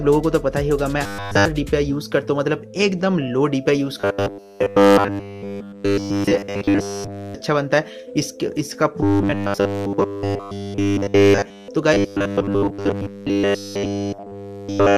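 A rigid, metallic 100 Hz buzz is heard from 1.04 to 1.46 s, 3.99 to 7.35 s, 9.03 to 11.68 s and 11.94 to 14.98 s. This robotic sound from repeated short buffers is likely caused by nearly everything being a looped 10 ms buffer.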